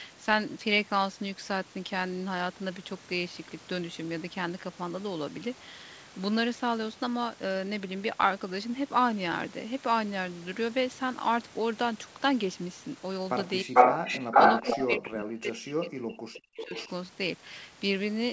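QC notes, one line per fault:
13.63–14.24 s and 14.72–16.74 s, speech suppressed in double talk: the speech dips sharply, roughly 35 dB in the first stretch and about 40 dB in the second, over about 2.3 s in total. This is likely an echo canceller turning down both talkers during overlap.
13.74–14.98 s and 16.57–16.89 s, echo leak: a copy of the speech returns 0.44 s late, about 10 dB above the speech in the first span and about 10 dB below it in the second. This is likely residual loudspeaker echo that was not cancelled.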